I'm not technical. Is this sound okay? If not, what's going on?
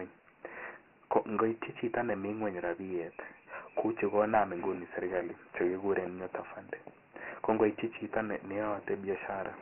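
No. Dialogic VOX ADPCM, throughout: the speech was squeezed into a crude phone-system format, so everything above about 3 kHz is gone and a gritty hiss trails the voice.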